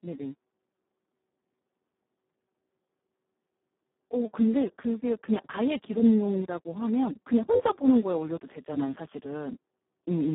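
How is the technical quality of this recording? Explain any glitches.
The technical quality is poor, with heavy Speex codec damage throughout. The speech sits in a narrow band of roughly 150 Hz to 3.6 kHz, with nothing above 3.8 kHz. The speech sounds hoarse, noisy and buzzy, close to robotic, which fits Speex at a very low bitrate near 4 kbps. At that rate the CELP coder has almost no bits for the excitation, so the voicing is rebuilt crudely. Simple band-limiting would sound muffled but clean, while this is muffled and rough.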